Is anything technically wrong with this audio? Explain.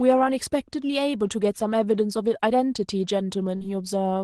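Yes. From 3.55 to 3.64 s there is a burst of packet loss. Several packets went missing, so the receiver stretched the last sound for about 50 ms, fading it, then resumed later with audio skipped. Unlike a plain dropout, the gap is a fading buzz or hiss, not silence.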